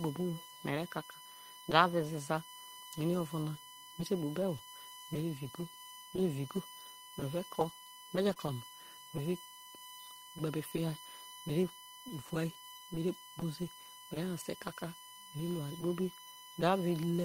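Running through the whole clip is a USB whine: a steady tone at 1 kHz with a harmonic series above it, strongest at 3 kHz, sitting roughly 20 dB below the speech. It comes from the USB bus drawing current in regular 1 ms frames, and that pulsing leaks into the audio path through shared power or ground. On a spectrogram it appears as thin, unbroken horizontal lines at 1 kHz, 2 kHz, 3 kHz and so on, with the 3 kHz line brightest. It stays visible through pauses where the speech energy drops away.

At 8.29 to 8.31 s there is a lost packet rebuilt from error correction, covering 20 ms, which points to a single lost packet. The following packet carried a low-bitrate copy of it, and the decoder played that copy instead of leaving a gap. The result is a brief stretch that sounds rougher and noisier than the audio around it. On a spectrogram it shows as a narrow column with coarser, grainier texture, and the waveform runs on without any dropout.

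Right after, from 8.33 to 8.38 s, comes a short concealed packet loss. About 20 ms of audio never arrived in time, and the receiver filled 22 ms by extending the preceding sound before blending back into the real signal. It is heard as a momentary smear or wobble. In the waveform the fill looks like a repeated or smoothed continuation of the previous cycles. On the spectrogram the detail blurs briefly and then snaps back where the real audio resumes.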